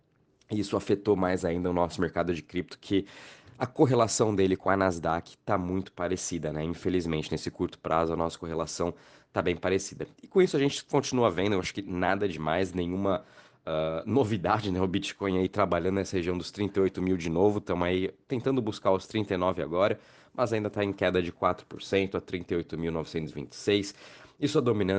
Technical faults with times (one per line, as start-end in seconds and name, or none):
none